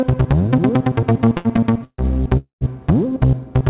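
The audio has passed through a call path, and nothing is heard above 4 kHz, which fits G.711 A-law at 64 kbps. From 1.1 to 2.01 s there are repeated stalls (stutter). Packets came in late or too slowly, so the jitter buffer kept running dry. It ran dry 12 times. Each time the receiver carried the last sound forward until data arrived. These fills add up to 343 ms, about 38% of that stretch. The longest lasts 148 ms. Nothing is lost, but the sound drags and stutters. Then a call audio freeze runs from 2.37 to 2.64 s. The last sound is held and then gives way to about 120 ms of silence, 238 ms in all. The likely cause is packets held up in transit, which left the jitter buffer empty. Playback then resumes where it stopped, now running 238 ms later.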